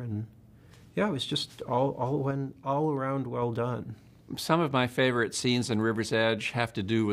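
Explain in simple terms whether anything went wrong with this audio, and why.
At 2.31 s a sudden gain jump makes the sound and background quieter together, until 3.42 s. A volume setting likely changed instantly, without a fade.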